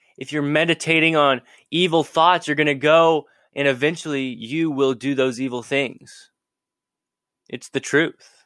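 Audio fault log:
No faults were found in this audio.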